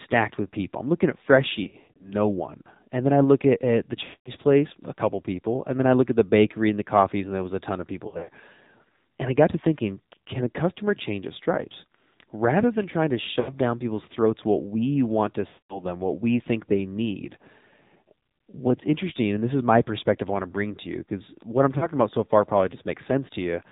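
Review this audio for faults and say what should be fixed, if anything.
The whole clip carries the sound of the AMR narrowband mobile codec, and the damage is plainly audible. Nothing above 4 kHz survives. The voice is built from a vocal tract model, a pitch predictor and a few pulses per 5 ms. At this clip's rate it sounds buzzy and synthetic, which fits the 7.4 kbps AMR-NB mode. Prevention: carry the call over a wideband or higher-bitrate path, or record locally.

Lost AMR speech frames break the audio six times. They fall at 1.64 to 2.14 s, 4.04 to 4.31 s, 8.08 to 8.29 s, 13.40 to 13.55 s, 15.48 to 15.83 s, and 21.78 to 21.87 s. The gap at 8.08 s follows "a ton of people". The gap at 13.40 s comes between "than trying to" and "down people's throats what". The gap at 21.78 s sits between "you because what I'm" and "about so far probably".

Each gap comes from frames that failed their checksum. 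The decoder then repeated the last good pitch and vocal tract settings with falling gain. That produces drawn-out, fading sound. The first event loses 260 ms scattered over 360 ms, with a longest run of 120 ms. The others lose 220, 140, 80, 220 and 40 ms. Prevention: improve radio coverage or use a link with stronger error protection.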